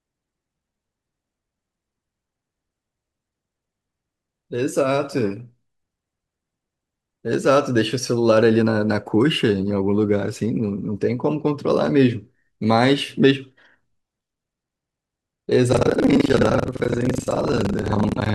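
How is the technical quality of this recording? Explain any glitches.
There's one real glitch, right at the end. From 15.70 s to 18.34 s there's buffer tearing. Writer and reader have slipped, so about a third of each buffer replays audio from roughly a tenth of a second earlier. That gives a robotic 23.4 Hz buzz, which fits a 2048-sample buffer.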